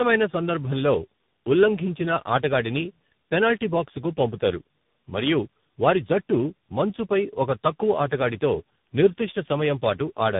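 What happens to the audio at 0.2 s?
The speech at 0.2 s sounds rough, muffled and warbly, with nothing above 3.8 kHz. This is tandem speech coding throughout: three speech codecs in a row, each re-coding the last one's damage.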